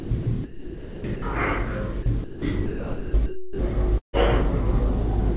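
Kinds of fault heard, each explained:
sound chopped by the voice detector: From 0.0 to 1.22 s and again from 2.03 to 3.59 s, the sound keeps cutting in and out. Roughly 800 ms of the first stretch and 1.02 s of the second are swapped for a flat, synthetic hiss, most likely because a sender-side voice detector gated the audio and inserted comfort noise. On a spectrogram the real detail gives way to even, featureless noise blocks. The waveform shows abrupt edges between them.
burst of packet loss: Between 3.98 and 4.16 s, about 150 ms of audio never arrives. The receiver stretches the last sound it had across the hole, and that continuation fades away, leaving roughly 120 ms of silence before the sound picks up further on with that section gone. Within the 4 kHz band the call path carries, a spectrogram shows a smeared, repeating pattern dying into a blank column, and the waveform shows a decaying envelope dropping to a flat line.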